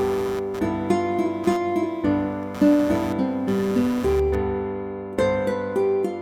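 Computer activity noise runs from 0.0 to 4.35 s: a buzzy chirping near 150 Hz, around 20 dB below the audio, caused by processor load disturbing the shared ground.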